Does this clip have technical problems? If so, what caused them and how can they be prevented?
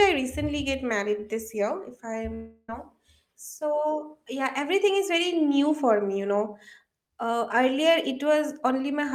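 Yes. From 2.34 to 2.69 s the speech gives way to a buzzy continuation of the last sound that fades for about 340 ms, then drops to roughly 20 ms of silence before the talker resumes with that stretch missing. This is likely a long network dropout. No packets arrived for about a third of a second, so the receiver's concealment stretched the final fragment until it gave out. Larger jitter buffering with redundancy or forward error correction on the link would prevent it.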